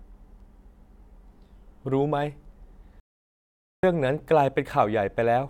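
A playback stall runs from 3.00 s to 3.83 s in this speech. The talker is cut off mid-flow and the output drops to dead silence for about 0.83 s before the speech picks up again. The likely cause is the player running dry of buffered data, or its audio thread being held up, so nothing reached the output until it recovered and resumed.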